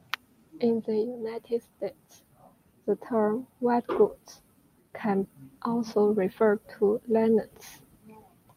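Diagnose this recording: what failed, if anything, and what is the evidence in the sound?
Listening to the speech recording, nothing stood out as a fault at any stage of the chain.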